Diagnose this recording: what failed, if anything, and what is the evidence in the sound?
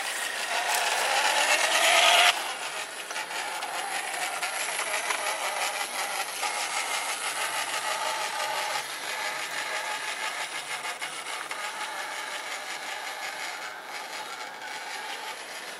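The failure is at the codec stage: damaged data in a compressed stream. Two brief disruptions break the sound, from 4.14 to 4.16 s and from 6.41 to 6.43 s. Each lasts about 20 ms. At these points part of the compressed data is wrong. The decoder cannot read those frames correctly and loses its place. It then hunts for the next valid frame header and resumes decoding from there.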